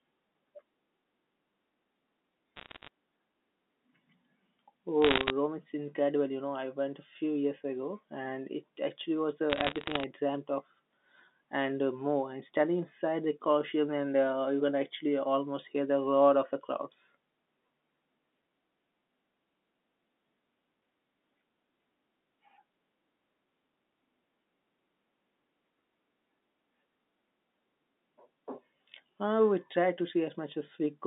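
Bursts of bit errors on a digital phone line appear at 2.56 to 2.88 s, 5.02 to 5.30 s and 9.50 to 10.04 s, laid over telephone-band sound running from 200 Hz to 3.6 kHz. Flipped bits corrupt individual samples, and hits on the sign or upper bits produce sharp ticks that pile into crackle, densest in the second burst at roughly one error per hundred bits. Unlike packet loss, nothing drops out or repeats. The speech underneath carries on intact.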